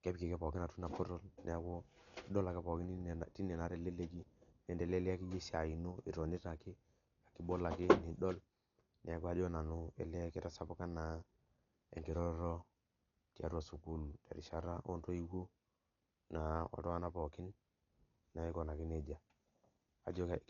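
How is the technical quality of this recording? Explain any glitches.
The recording is heavily degraded by lossy coding throughout. Likely Dolby Digital compression, starved of bits in a way that fits about 48 kbps, cuts the band at 7.1 kHz and replaces unfunded frequency lines with dither noise, so the speech sounds dull and muffled, with a rough, fluttering hiss clinging around voiced tones.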